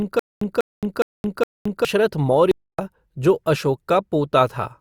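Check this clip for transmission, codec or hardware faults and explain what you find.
Two faults are audible: a stutter with silent gaps at the opening and a brief playback stall shortly after.

From 0 to 1.85 s, already under way when the clip begins, the stream was likely stalling and replaying its last buffered fragment on each retry before running dry. The result is a stutter with silent gaps: a 194 ms burst of speech repeats four times, each followed by about 220 ms of digital silence, giving an even 414 ms cycle. The speech that should have filled that stretch never arrives.

From 2.51 to 2.79 s, the player likely ran short of data or had its output thread held up, so nothing reached the output for 272 ms. This playback stall cuts the speech off abruptly in mid-flow, leaves a clean hole of silence, and then the sound resumes once the output recovers.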